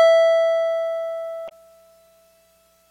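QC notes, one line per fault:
1.45–1.52 s, damaged data in a compressed stream: a brief chirp, squawk, click or short hole in the music where the decoder hits corrupted frames, loses sync and hunts for the next header.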